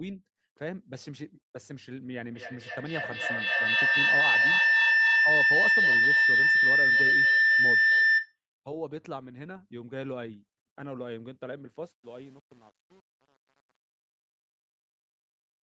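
From 2.28 s to 8.39 s a feedback howl builds as the microphone-to-loudspeaker loop gains level on each trip, rising to about 13 dB above the speech near 2 kHz, with the loop repeating roughly every 300 ms. A spectrogram shows a bright horizontal line brightening over time.

From 11.84 s to the end, truncation distortion spoils the fade-out. The fade stage keeps too few bits, which fits a 7-bit stage without dither. The tail turns gritty. The waveform shows square stair-steps, and the spectrogram shows broadband grit.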